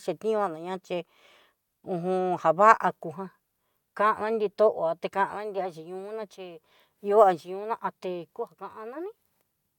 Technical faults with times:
none

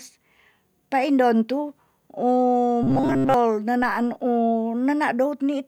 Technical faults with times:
2.83-3.34 robotic sound from repeated short buffers

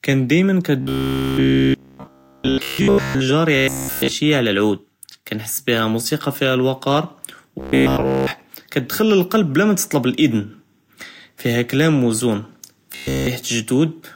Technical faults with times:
0.81-3.21 robotic sound from repeated short buffers
3.56-4.11 robotic sound from repeated short buffers
7.59-8.31 robotic sound from repeated short buffers
12.92-13.27 robotic sound from repeated short buffers

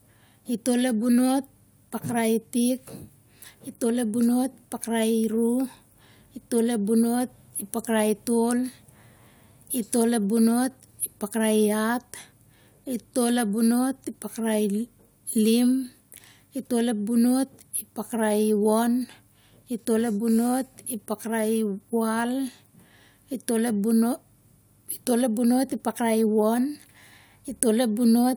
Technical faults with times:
none

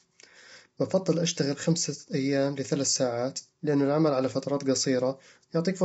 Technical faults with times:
0.00-5.84 low-delay AAC compression

